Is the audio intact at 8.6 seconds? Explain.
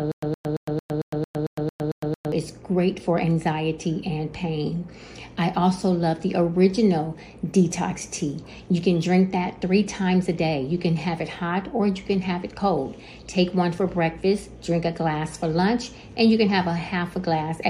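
Yes, the audio at 8.6 seconds is intact, with no dropout, glitch or other fault at that moment.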